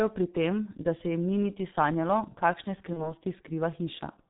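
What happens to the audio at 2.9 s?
Just after "ni niti sanjalo kakšne", VoIP packet loss concealed by the speech codec runs from 2.93 to 3.15 s. The sound becomes a fading buzzy tone or coloured noise rather than dropping to silence, which fits one lost 30 ms frame whose extrapolation lingers as the decoder recovers.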